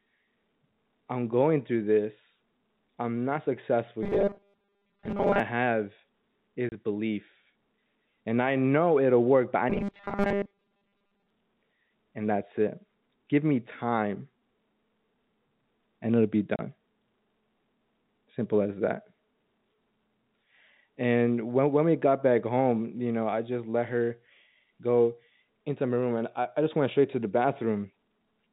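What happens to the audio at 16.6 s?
Packet loss filled with silence at 16.56 to 16.59 s: one 30 ms packet goes missing and plays as silence, leaving a hard-edged gap.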